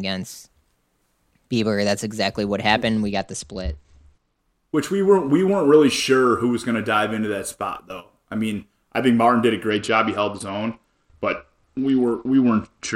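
From 3.12 to 4.39 s and from 9.7 s to the end, a Bluetooth SBC bit pool drop dulls the speech and adds gritty noise, consistent with bit pool 31 falling to 10 (near 77 kbps). A spectrogram shows the upper bands emptying, and the noise floor rising.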